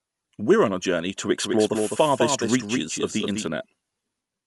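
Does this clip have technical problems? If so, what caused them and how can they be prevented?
Yes. Throughout, the speech sounds dull and rough, likely from Dolby Digital compression at a low rate, which fits a 64 kbps stream. On a spectrogram nothing appears above 11.4 kHz, and noisy fill shows around tones. Encode at a higher bitrate to prevent it.

From 1.37 to 3.47 s a doubled audio track appears: a full-band copy about 5 dB quieter trails by about a fifth of a second, starting and stopping abruptly. In the waveform each syllable's envelope is repeated at that offset. Mute or remove the second capture path or the misaligned edit copy so that only one signal reaches the mix.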